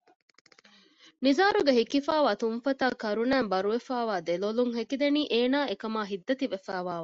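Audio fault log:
Throughout: MP2 compression. The speech sounds dull and muffled, with a gurgling, grainy roughness. Upper frequencies come and go, so brightness flickers from moment to moment. This is likely MPEG Layer II coding at a low rate, which fits about 80 kbps. The codec divides the sound into 32 sub-bands and shares out too few bits. It drops whole upper bands and quantises the rest coarsely, which leaves the granular texture.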